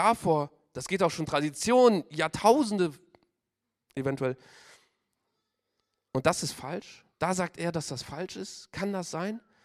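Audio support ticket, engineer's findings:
No fault found in the audio; nothing to report for this ticket.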